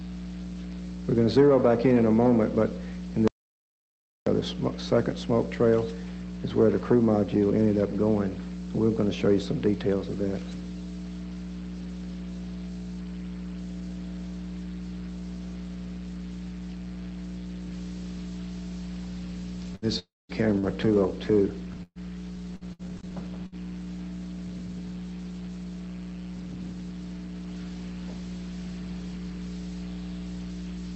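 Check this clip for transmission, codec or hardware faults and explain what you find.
Four faults stand out, all between 3.28 s and 23.55 s. The audio passed through an Opus call path, and its top end stops near 8 kHz, which fits a 32 kbps setting.

From 3.28 to 4.27 s there is an audio dropout to silence. The sound cuts off and returns after about 0.99 s. The gap is dead silent, with no room tone. The input was likely lost, and the recorder kept writing silence.

At 19.75 to 19.86 s there is a burst of packet loss. Packets went missing or arrived too late. The receiver stretched the last sound over 65 ms and let it fade. About 60 ms of audio never plays, and the sound resumes further on.

From 19.99 to 20.32 s there is a long network dropout. The receiver continues the last sound, then about 210 ms of silence follows. Roughly 300 ms of audio is lost. A stall in the network is the likely cause.

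From 20.59 to 23.55 s there is repeated packet loss, which gives a robotic sound. There are five gaps, and the longest is 124 ms. Each gap is patched by extending the previous sound. Together they cover 11 percent of the stretch, so the audio sounds choppy and pieced together.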